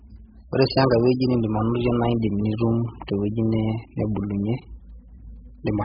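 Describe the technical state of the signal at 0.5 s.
At 0.5 s the speech carries heavy AAC compression damage, and it runs through the whole clip. Nothing reaches above 5 kHz, so the sound is dull and muffled. The damage points to a very low bitrate, around 8 kbps, and likely AAC-LC coding. At that rate the encoder drops the top of the spectrum and starves the remaining bands of bits. Sibilants turn fizzy. Sustained sounds warble and smear.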